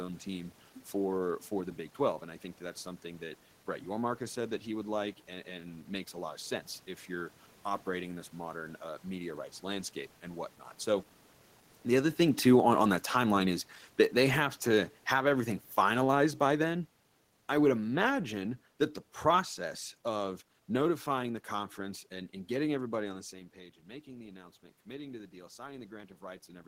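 From 12.32 s to 22.96 s the speech and room background sink together by about 12 dB: automatic gain falling, as the control eased its gain down after a louder input around 11.5 s. From 23.31 s to the end, speech and room noise swell together: automatic gain rising, as the control lifts its gain after the input dropped by about 12 dB near 23 s.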